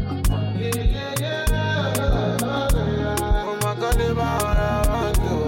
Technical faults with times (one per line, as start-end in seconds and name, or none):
none